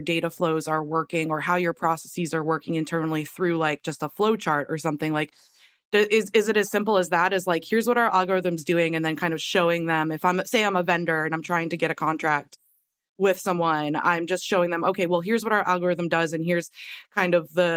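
No technical faults can be heard anywhere in the recording; the signal holds steady with no audible disturbance at any point.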